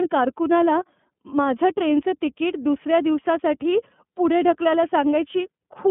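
Speech, carried throughout by the iLBC codec. Nothing survives above about 3.4 kHz, and the voice sounds rough and slightly synthetic, consistent with 30 ms frames coded independently at 13.33 kbps. A plain telephone band limit would sound muffled but not grainy.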